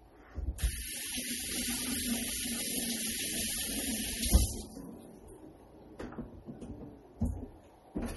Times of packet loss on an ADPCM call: none

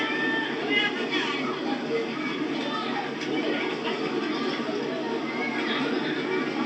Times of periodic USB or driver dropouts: none

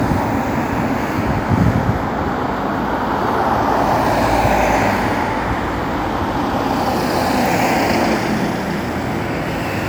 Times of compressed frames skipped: none

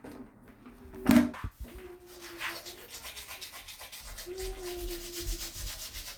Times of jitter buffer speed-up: 3.90-4.85

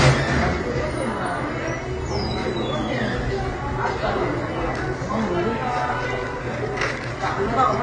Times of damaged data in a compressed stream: none

